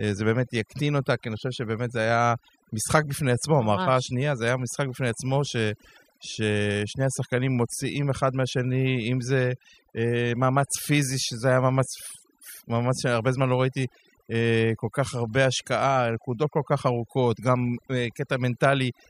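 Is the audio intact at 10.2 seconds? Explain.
No: overdone noise removal runs throughout, including 10.2 s. An over-strong noise reducer cuts bands near its noise estimate, taking quiet speech with them and breaking the background into twinkling, warbling specks.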